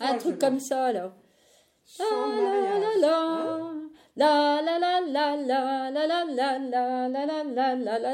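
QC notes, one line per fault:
Nothing stood out on listening, and there is no fault to log.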